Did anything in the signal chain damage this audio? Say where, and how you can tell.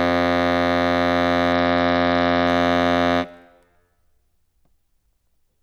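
Yes. The damage is at the codec stage, a Bluetooth SBC bit pool drop from 1.53 to 2.47 s in this music. Treble dulls and gritty noise appears, which fits the link lowering the bit pool from 31 to 10, near 77 kbps, starving upper sub-bands and coarsely quantising the rest.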